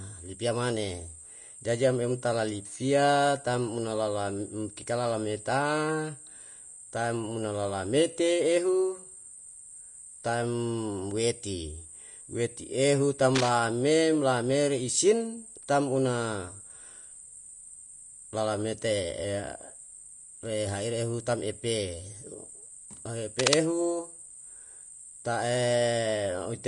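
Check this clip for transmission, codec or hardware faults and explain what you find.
The speech carries two faults: codec damage throughout and two short bursts of scratching.

Vorbis compression, throughout: nothing remains above 10.6 kHz, and the treble is coarsely quantised into plainly audible grainy hiss, likely from a low bitrate around 34 kbps.

Cable scratch noise, 13.34 to 13.50 s and 23.39 to 23.61 s: dense, uneven rustling bursts, likely from a worn contact shifting resistance. The first is a little below the speech and the second about as loud.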